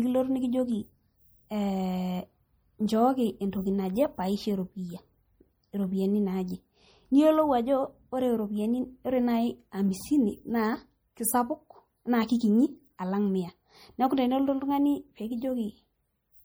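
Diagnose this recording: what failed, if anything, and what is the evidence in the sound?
MP3 compression throughout the speech, a codec-stage fault: a watery, swirly texture, likely from an encoder starved of bits, which fits roughly 48 kbps.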